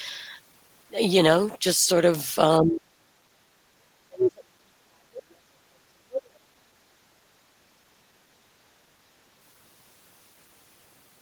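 At 2.59 s the talker's level sinks by roughly 25 dB for about a quarter of a second, the first instance of speech suppressed in double talk. The likely cause is the echo canceller failing to tell the near talker from loudspeaker echo while both sides spoke, so it attenuated everything. The same happens far more heavily from 3.72 to 7.0 s, with drops near 40 dB, and again briefly at 7.23 to 7.31 s. On a waveform these show as pinched or hollowed stretches of the envelope. On a spectrogram, harmonics fade or break off.

Alongside these, at 3.12 to 3.25 s and at 7.65 to 7.74 s, the room tone ducks by about 16 dB and then about 8 dB. This is background gated by the echo canceller: it clamps the microphone while the loudspeaker plays and releases it quickly. You hear a momentary hole in the ambience, seen as a short, full-band darker slot in the noise floor.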